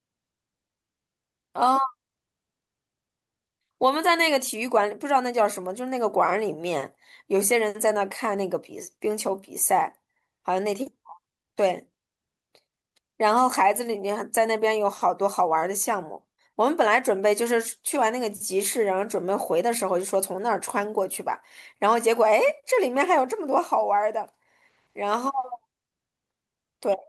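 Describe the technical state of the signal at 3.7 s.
At 3.7 s, a jitter buffer speed-up runs from 2.93 to 5.80 s. Trimmed pitch periods play the speech about 11% faster and hurried, but unlike a resampling error its pitch stays unchanged.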